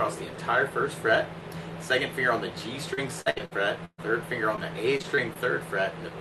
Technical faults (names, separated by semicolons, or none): repeated packet loss (robotic sound); short concealed packet loss